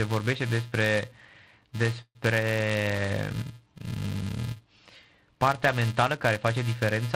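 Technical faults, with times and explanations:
Throughout: filter restarted on every block. There's a steady buzz at 375 Hz riding under the speech, rising and falling with its level. A filter loses its state and starts each block cold, kicking a tiny transient every time, which points to 128-sample blocks.
2.01–2.28 s: call audio freeze. The last sound gets stretched into a fading buzz for around 137 ms, then about 60 ms of dead silence. That's likely packets stalling in transit and the jitter buffer draining. Nothing is lost, but everything after runs 137 ms late.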